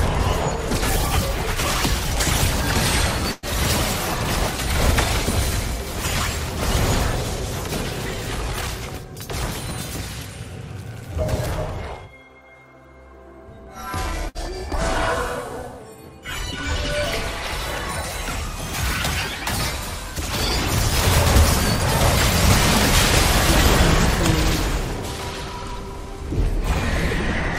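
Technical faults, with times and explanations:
3.31–3.46 s and 14.29–14.38 s, burst of packet loss: Two short runs of audio never arrived in time. The receiver covered each gap by stretching the last sound it had and fading it down, for about 112 ms in the first gap and 59 ms in the second. Playback then jumps ahead. About 120 ms of the original audio is lost at the first point and 60 ms at the second.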